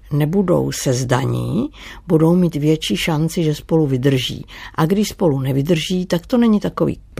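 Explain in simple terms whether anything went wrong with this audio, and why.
Nothing went wrong: no audible fault turns up anywhere in the speech.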